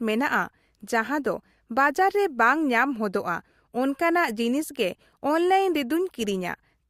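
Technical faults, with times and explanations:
No technical faults are audible anywhere in the recording.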